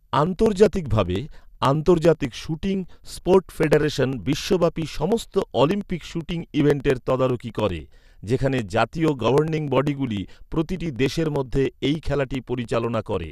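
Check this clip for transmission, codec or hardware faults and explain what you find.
There is one fault: periodic USB or driver dropouts from 0.07 s to 13.24 s. Roughly every 0.1 s, around a millisecond of audio is skipped, giving regular ticks during speech. A spectrogram shows evenly spaced thin vertical broadband lines, and the waveform shows small step discontinuities.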